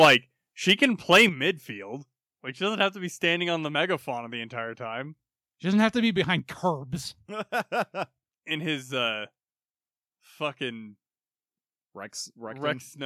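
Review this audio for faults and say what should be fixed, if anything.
The speech peaks sound harsh and crackly at 0.0 to 0.15 s (about 10 dB over, with a good share of the waveform flattened), 0.69 to 0.85 s (about 3 dB over, lightly) and 1.11 to 1.25 s (about 7 dB over). That's likely microphone overload, where the input gain is high enough that the converter chops off the tops of the loudest syllables. Bringing the mic gain down until the loudest syllables stay well under full scale would stop it.

The level drops suddenly at 0.05 s (about 4 dB), 1.29 s (about 7 dB) and 6.39 s, right after "doesn't have to be" (about 4 dB). That's likely the microphone volume stepped down by the call software after it found the mic too loud. Setting a sensible fixed input level and turning off automatic mic gain adjustment would prevent these jumps.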